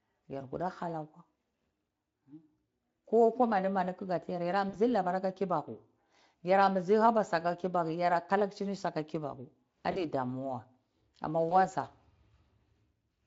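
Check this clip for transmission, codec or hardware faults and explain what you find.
One fault is present: VoIP packet loss concealed by the speech codec, heard three times. At 4.69 to 4.76 s, just before "labar ka kibaku", and 9.91 to 10.03 s, just before "damua amma", about 40 ms of audio drops out. At 11.49 to 11.55 s, right after "damua amma", about 20 ms drops out. Each time the decoder stretches its last pitch and filter at falling gain. The sound turns briefly into a buzzy tone or a fading coloured noise, then recovers.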